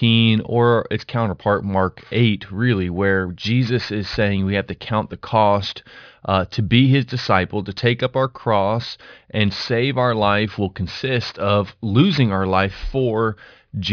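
Aliasing runs through the whole speech clip. Content above 5.5 kHz, which points to a drop to an 11 kHz rate without filtering, folds back down as gritty, metallic tones roughly 25 dB below the voice. Unlike plain band-limiting, sibilants turn harsh and false rather than simply dull.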